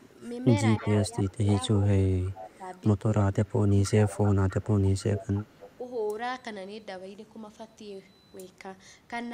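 From 0.79 to 1.49 s and again from 2.09 to 5.49 s, the speech dips by up to about 10 and then about 15 dB in patches. That is speech suppressed in double talk, likely an echo canceller ducking the near talker while the far side talks. Unlike echo leak, it removes sound rather than adding any. An echo leak runs from 0.8 to 2.58 s, 3.83 to 4.54 s and 5.18 to 5.75 s: a faint copy trailing about 300 ms behind, roughly 15 to 20 dB down, heard as a distinct repeat rather than room reverberation.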